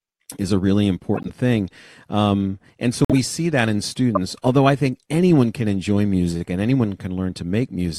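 Damaged compressed frames were passed to the decoder and played as though intact, so misread gains and codes put energy at the wrong frequencies. This corrupt frame decoding shows up three times in the speech: a short, fairly quiet glitch from 1.14 to 1.30 s after "is a really", then loud glitches from 3.05 to 3.13 s between "and so" and "see that in", and from 4.15 to 4.17 s before "although I think anyone". Each lasts only a handful of frames.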